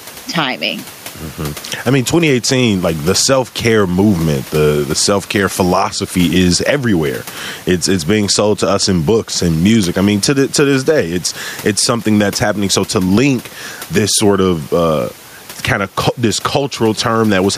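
Speech with gain pumping throughout: the room noise, about 30 dB below the speech, swells by roughly 10 dB in pauses and ducks under each loud syllable, likely from excessive gain hitting a fast limiter. On a waveform the envelope looks flattened, and a spectrogram shows the noise floor brightening and dimming between phrases.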